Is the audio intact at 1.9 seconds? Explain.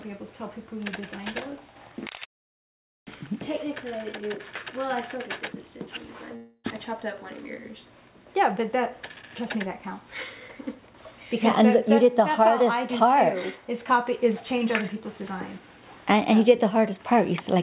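Yes, the audio is intact at 1.9 seconds, with no fault at that moment.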